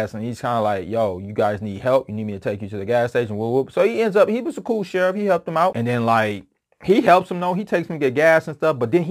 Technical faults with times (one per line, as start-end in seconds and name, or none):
0.00-9.10 crude rate conversion